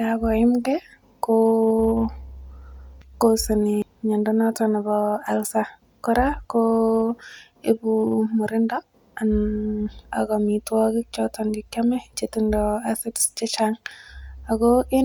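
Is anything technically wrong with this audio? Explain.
No, there are no technical faults.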